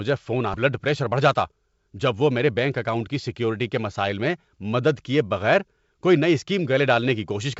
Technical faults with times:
0.54-0.56 skip ahead
0.66-3.52 jitter buffer speed-up

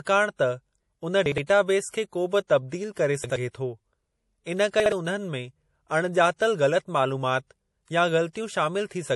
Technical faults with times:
0.00-9.15 low-bitrate audio saved at a high bitrate
1.26-1.38 chunks out of order
3.24-3.36 chunks out of order
4.80-4.92 chunks out of order

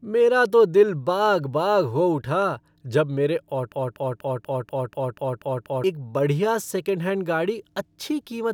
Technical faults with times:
3.72-5.84 broken-record loop

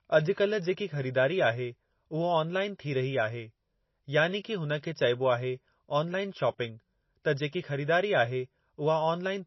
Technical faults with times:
0.00-9.46 MP3 compression

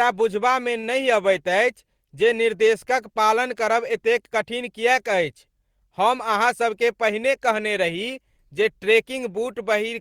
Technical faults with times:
6.40-6.81 jitter buffer speed-up

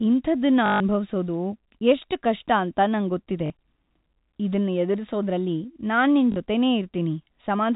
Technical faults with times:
0.66-0.80 packet loss with last packet repeated
3.46-3.50 packet loss with last packet repeated
6.32-6.36 packet loss with last packet repeated

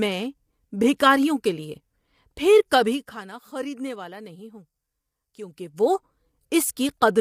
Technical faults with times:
0.00-7.21 low-delay AAC compression

